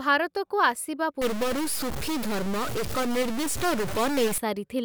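Just after "ଭାରତକୁ ଆସିବା", from 1.22 to 4.38 s, harsh, buzzy stuck-bit distortion appears. It is likely one data bit frozen, so samples jump by roughly -25 dBFS. The waveform shows square steps, and the spectrogram fills with broadband hash, even in pauses.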